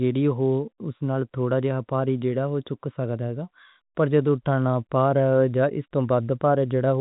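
No technical faults are audible.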